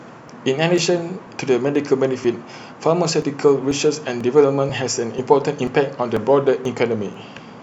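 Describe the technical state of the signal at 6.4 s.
At 6.4 s the speech lies within a train of regular ticks or pops every 0.49 s from 0.28 s to 7.14 s, heard only while sound is present. These are periodic USB or driver dropouts: at that fixed interval something stalls the USB bus or audio driver, and roughly 10 ms of audio is skipped rather than filled, so the waveform jumps across the gap and clicks, about fifteen times over the span.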